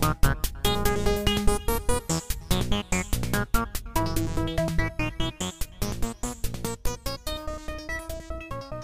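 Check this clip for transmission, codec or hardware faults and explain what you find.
No faults turned up anywhere in the recording.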